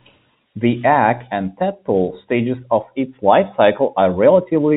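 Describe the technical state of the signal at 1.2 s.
At 1.2 s there is a brief packet loss with pitch repetition, running from 1.18 to 1.20 s, just before "and tadpole stages of". About 20 ms of audio went missing, which points to a single lost packet. The receiver bridged the hole by repeating the last pitch period, so the voice holds for a moment with a slight buzzy sustain. Unlike a plain dropout, there is no silent gap or click, only that momentarily frozen pitch, heard through the 4 kHz-limited G.711 telephone band.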